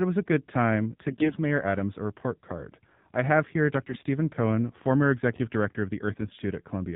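The whole recording runs through the AMR narrowband mobile codec. Nothing above 4 kHz survives, so the speech sounds thin and boxed in. The voice is buzzy and synthetic, which points to a low AMR-NB mode, around 7.4 kbps.

From 1.08 to 1.39 s, just after "was a good time", AMR bit errors hit. Roughly one bit in ten arrives flipped. The excitation pulses land wrongly, so the voice turns hoarse and gargly. The same happens from 3.88 to 4.02 s, after "card I have here", slightly milder.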